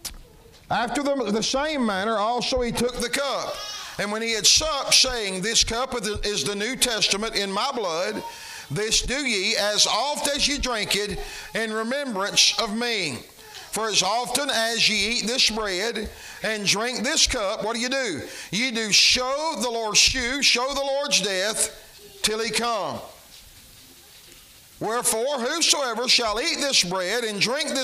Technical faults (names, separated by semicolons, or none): pre-emphasis left on